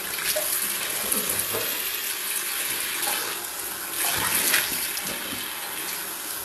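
Throughout, the treble is gritty and metallic, with nothing above 12.3 kHz. This is likely HE-AAC compression, pointing to a very low bitrate near 16 kbps.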